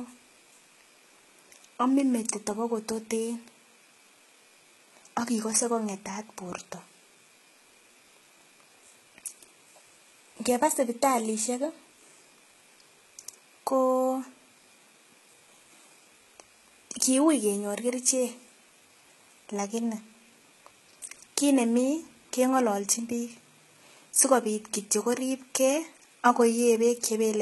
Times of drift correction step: none

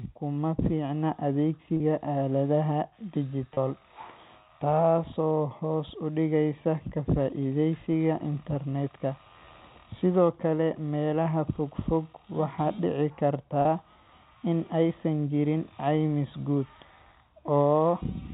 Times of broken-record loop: none

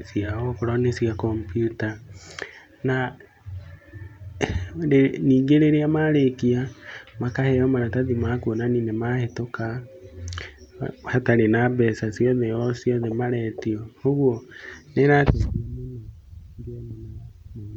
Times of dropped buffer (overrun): none

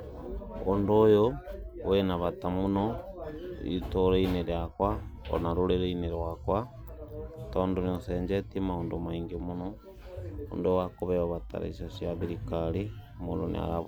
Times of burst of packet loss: none

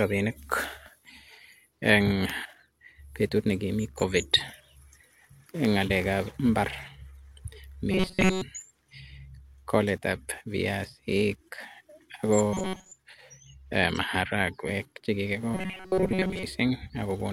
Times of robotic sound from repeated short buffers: 7.92-8.42, 12.54-12.91, 15.55-16.44

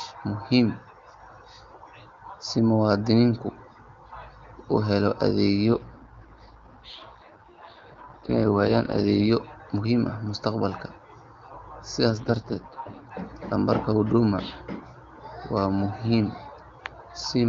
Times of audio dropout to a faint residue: none

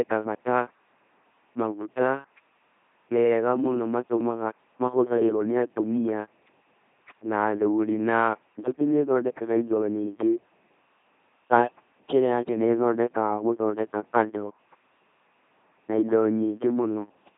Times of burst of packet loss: none

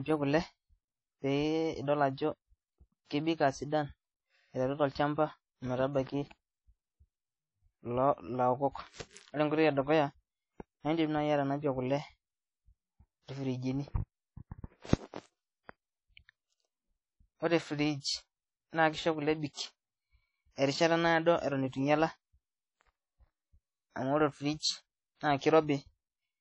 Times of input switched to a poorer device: none

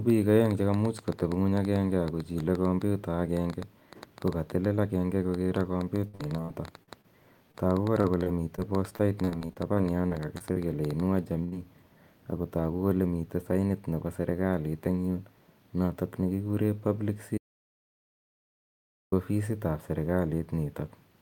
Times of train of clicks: 0.10-11.01

